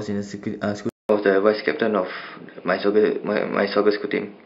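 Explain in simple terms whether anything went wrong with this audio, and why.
Input switched to a poorer device, at 0.89 s: after a fifth-of-a-second gap, the speech turns dull and boxy until the end, with nothing above 5.1 kHz, a level shift and faint new background noise. The recording likely jumped to a lower-quality microphone.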